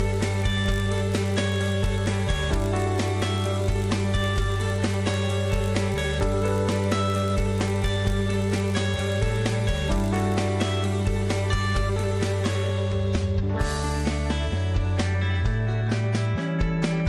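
From the start to about 10.50 s, a steady buzz at 50 Hz rides on the sound, made of closely spaced ticks that grow louder and softer as the level rises and falls. This is a filter restarted on every block: it loses its memory at each block boundary and starts again from silence, so each block opens with a small transient. Repeating every 20 ms, those transients fuse into the buzz, and at 10.50 s it stops.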